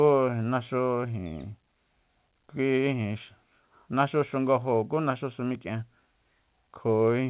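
No technical faults are present in this speech, which carries the narrowband character of a normally working call path, with nothing above 4 kHz, consistent with G.711 A-law coding.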